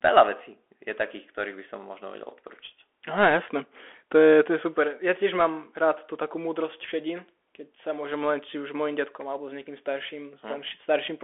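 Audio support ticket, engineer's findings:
Bluetooth CVSD headset codec, whole clip. Band roughly 250 Hz to 3.4 kHz, nothing above 3.8 kHz. Plainly audible codec damage: scratchy s sounds, granular hiss under speech, loud bright passages distorting as the one-bit step fails to keep up. Fits a 64 kbps CVSD headset link. Unlike a clean telephone band-limit, the grit and slope-overload distortion track the signal.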